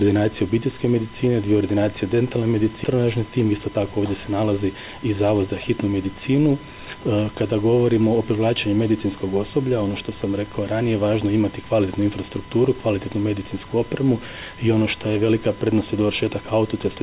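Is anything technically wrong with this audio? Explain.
Yes, there are two faults close together, heard through a narrowband call path whose G.711 mu-law-style sound stops at 4 kHz.

Skip ahead, 2.84 to 2.95 s: the audio lurches forward, and roughly 0.7 s of material is simply gone, with the two sides butted together and no gap. A stretch was dropped, on the way or at the receiver, while later audio was already waiting, cutting the delay in one jump.

Jitter buffer speed-up, 3.44 to 3.75 s: the sound briefly rushes at 114% speed without any change in pitch. The jitter buffer was still holding more than its target, so it trimmed short pitch-period-sized pieces in succession, removing about 50 ms overall.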